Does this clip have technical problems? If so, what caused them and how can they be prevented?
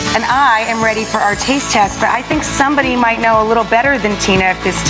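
Yes. Gain pumping runs through the whole clip: the gain ducks by around 10 dB as soon as anything loud arrives, so the level keeps breathing and the dynamics are squashed flat. The likely cause is input gain set far too high, with a fast limiter or compressor clamping down on each peak and releasing in the pauses. The top end stops at 8 kHz, which fits a wideband call codec. To prevent it, lower the mic gain so the limiter rarely has to act.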